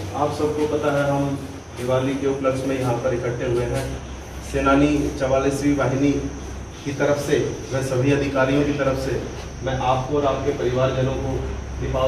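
Nothing stood out on listening to this recording.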